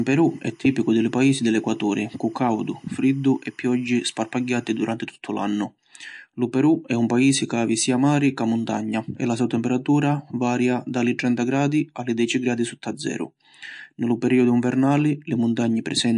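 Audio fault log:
Throughout: MP3 compression. Plainly audible watery, swirly texture and nothing above 11.2 kHz, likely from a low bitrate around 51 kbps starving weak frequency lines.
0.00–4.84 s: timecode bleed. A 25 frames-per-second linear timecode leaks in about 40 dB below the speech, chirping between roughly 1 kHz and 2 kHz.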